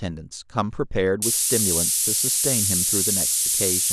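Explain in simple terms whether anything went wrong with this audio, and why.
From 1.22 s to the end, the speech sits under a steady, thin hiss that is much sharper in the high frequencies. This is low bit depth with noise shaping. The hiss fits a signal stored with only about 4 bits, with the rounding errors pushed upward, and it is even louder than the speech itself.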